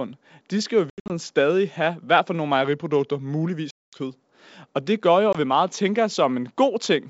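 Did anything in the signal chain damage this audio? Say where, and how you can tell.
Yes. The network path lost packets on this ADPCM call. The gaps went silent and the decoder's predictor and step size drifted from the sender's. Holes appear at 0.90–1.10 s (about 160 ms missing, longest run 80 ms) between "de skal jo i" and "stadig have hvert for", at 3.71–3.99 s (220 ms), and at 5.33–5.36 s between "det gør jo" and "vi meget tænker". Each has hard edges, and the sound comes back slightly distorted.

From 2.64 s to 3.47 s, right after "have hvert for nogle", the audio runs 5.8% slow and drops about 104 cents, roughly a semitone. This is likely a drift correction step, where clock-matching buffer logic briefly changed the playback rate.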